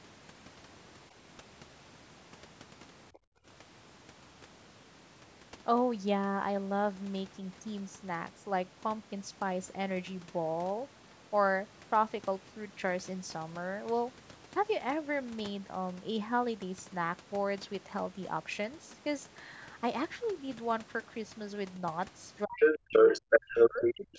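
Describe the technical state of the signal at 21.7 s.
At 21.7 s the speech signal is intact, with no fault present; it has simply passed through the usual call microphone processing, which removes the lowest bass and leaves nothing above 8 kHz.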